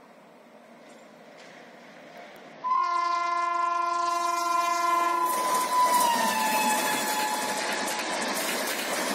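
Twice, from 2.53 to 4.10 s and from 7.54 to 8.35 s, the audio turns dull and gritty: a Bluetooth SBC bit pool drop, consistent with a congested link forcing roughly 78 kbps encoding.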